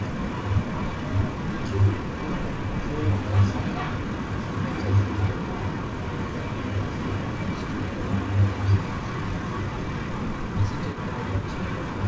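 From 0.0 to 12.07 s, a delayed copy of the speech trails the original by about 434 ms, roughly 10 dB quieter. This echo leak likely comes from a far-end loudspeaker whose echo canceller failed to suppress its own microphone pickup before sending it back.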